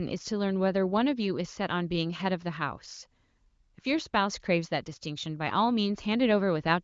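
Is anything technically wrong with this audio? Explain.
No, nothing in this speech clip is technically wrong. It has passed through the AMR wideband (HD Voice) codec at 23.05 kbit/s, so the bandwidth stops at about 7.5 kHz and any coding damage is faint at most.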